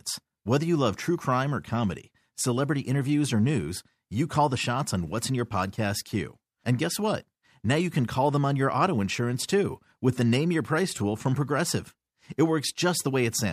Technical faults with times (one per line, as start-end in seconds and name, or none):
0.20-13.34 clock slip clicks